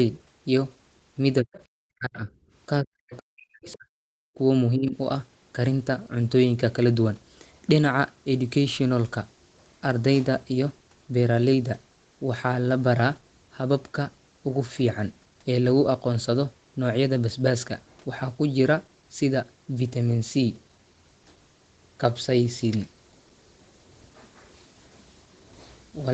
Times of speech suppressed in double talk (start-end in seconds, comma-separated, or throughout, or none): 1.41-1.52, 1.81-2.29, 2.82-3.89, 4.35-4.39, 4.76-4.96